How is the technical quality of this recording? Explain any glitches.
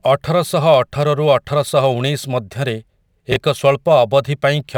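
The recording has one glitch in the speech. From 3.32 to 3.36 s, chunks play out of order: one 20 ms chunk arrives a chunk late and plays after the chunk that should follow it. The brief jumble shows as abrupt waveform discontinuities and thin vertical spectrogram lines at the joins.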